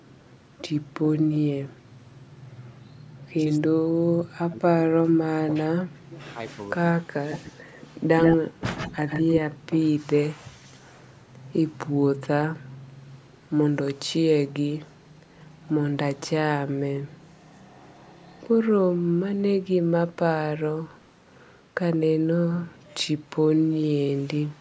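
Between 3.62 and 7.51 s, in three stretches (3.62 to 4.05, 4.45 to 6.58, 6.99 to 7.51 s), the speech keeps sinking by about 20 to 25 dB. That's speech suppressed in double talk: with both sides talking at once, the echo canceller likely couldn't tell this talker from the loudspeaker echo and turned everything down.

Overlapping the end of that, from 7.3 to 9.63 s, there's an echo leak. A copy of the speech trails the original by 134 ms at only about 5 dB below it, so the loudspeaker's echo was likely not fully cancelled and got sent back. At 21.0 s a much fainter scrap comes through, roughly 40 dB down, at the same delay.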